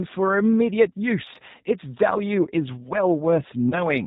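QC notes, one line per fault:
Throughout, G.729 codec: the speech is band-limited with nothing above 4 kHz and has a plainly audible rough, synthetic edge. It is rebuilt from a vocal tract filter, pitch predictor and sparse pulses, which points to an 8 kbit/s G.729A-type encoder.
3.70 to 3.84 s, VoIP packet loss concealed by the speech codec: about 20 ms of audio goes missing, which fits a single lost packet. The decoder stretches its last pitch and filter into a fading sound, and the speech stays weak or distorted until about 3.84 s while the frames rebuild.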